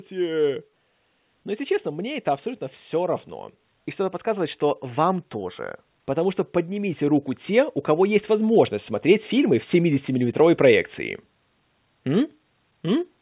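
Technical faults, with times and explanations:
4.23 to 10.37 s, automatic gain rising: over about six seconds the level climbs steadily by about 10 dB, with the speech and the background noise swelling together rather than the speech alone getting louder. The gain control judged the input too quiet and raised its gain gradually, so the noise floor comes up with the speech. The whole clip is also band-limited, with nothing above 4 kHz, which points to a narrowband telephone codec on the call path.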